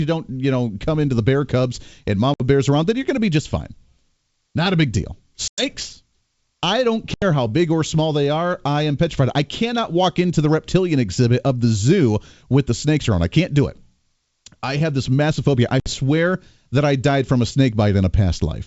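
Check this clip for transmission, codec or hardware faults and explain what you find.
The clip has four short dropouts, all from packet loss on an ADPCM call, carried over G.722 wideband coding whose 7 kHz bandwidth sounds intact. The gaps fall at 2.34 s (about 60 ms lost, between "the bear cubs and" and "bears around then you're"), 5.48 s (about 100 ms, after "a big deal"), 7.14 s (about 80 ms), and 15.80 s (about 60 ms, after "this massive phobia I"). Each loss of a few packets is filled with silence. The receiver's adaptive predictor and step size then no longer match the sender's, so the sound resumes with a brief, slightly distorted stretch before settling. On a waveform each appears as a flat, hard-edged hole. On a spectrogram it is a sharp vertical blank band.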